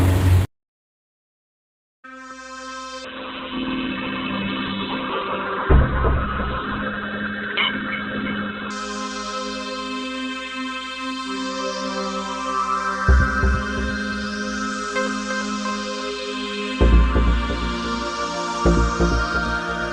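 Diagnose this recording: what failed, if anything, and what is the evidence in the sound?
From 3.05 s to 8.77 s the sound turns muffled and rough, with a watery, coarse texture, and the top end vanishes above 4 kHz before the full bandwidth returns. This is a call bitrate drop at the network and codec stage. The call's bandwidth estimate collapsed, so the Opus encoder was told to spend far fewer bits, consistent with a fall from about 48 kbps to roughly 6 kbps for about 5.7 s, coding coarsely and narrowing its bandwidth until the rate recovered.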